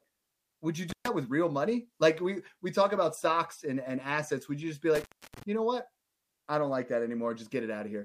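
Just after "would you" at 0.90 s, the speech drops out with crackle at the edges, leaving hiss for about 128 ms before "with real money" returns by 1.08 s. After "you just be", a longer gap of about 302 ms runs from 4.95 to 5.43 s. Both are intermittent contact: a loose cable or plug briefly opens the signal path.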